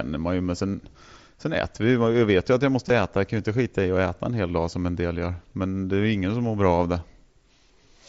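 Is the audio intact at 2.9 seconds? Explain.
No. At 2.88 s there is a brief concealed Bluetooth headset packet loss of about 15 ms, which fits two lost frames. The receiver patched the gap by repeating a best-matching stretch of recent waveform, so instead of the silent hole or click of a plain dropout, it sounds like a brief buzzy tone held at full level, with a small warble where real audio returns.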